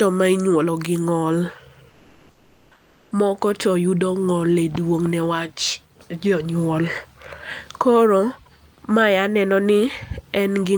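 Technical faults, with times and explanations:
1.89–3.11 s, comfort noise in place of the background: for about 1.22 s the real background gives way to a steady, featureless hiss, about 2 dB quieter. The real background returns when speech resumes. The likely cause is discontinuous transmission, with the receiver filling the pause with synthetic noise.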